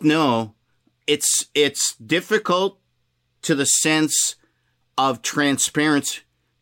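No technical faults can be heard in this recording.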